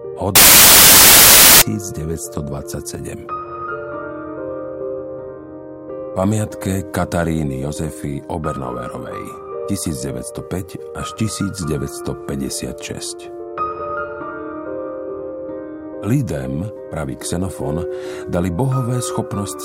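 From 0.36 to 1.62 s the audio turns into loud, harsh broadband noise. These are samples built from the wrong bytes: the reader joins each sample's bytes misaligned or in swapped order, so the rapidly changing low bits land in the most significant positions.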